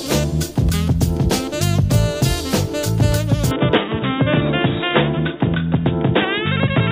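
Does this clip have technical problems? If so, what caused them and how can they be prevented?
Yes. From 3.51 s to the end, everything above 3.8 kHz drops out and the sound turns dull, with no gap, about the same level, and a new quiet noise floor. That's likely the input switched to a poorer device. Lock the input device before recording.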